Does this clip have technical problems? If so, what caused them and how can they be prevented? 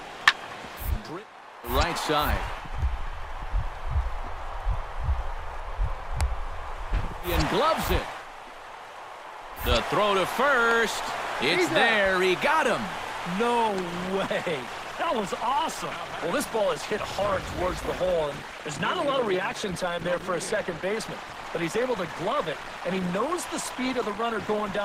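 Yes. At 13.68 s the audio abruptly drops in quality with more codec artefacts, and it stays that way to the end with no gap at the switch. That's an adaptive stream stepping down to a lower bitrate after the connection slowed. The sudden rise in codec artefacts fits a jump from roughly 64 kbit/s Opus down to about 16 kbit/s. To prevent it, give the stream a bandwidth margin or set a higher minimum bitrate.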